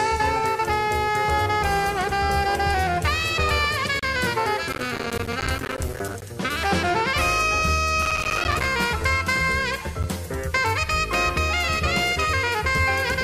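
From 3.99 to 4.03 s the sound stops dead for about 33 ms, a hard-edged hole of silence, and at 10.03 s a shorter 11 ms dropout of the same kind follows. This is a gap between stream segments: the timestamps of adjacent chunks don't quite meet, so the player fills the space with silence. The two holes fall six seconds apart, which fits a stream cut into 6-second segments. Nothing is missing, only delayed.

Between these, from 4.73 to 6.22 s and again from 8.02 to 8.66 s, a dense gritty crackle tears across the sound and then clears. This is processor overload crackle. The processor fell behind and missed buffer deadline after deadline, and each miss left a tiny slice of silence. Their rapid spacing points to buffers of roughly 5 ms. Strung together, the many hard-edged dropouts merge into a continuous rasp that lasts only as long as the overload.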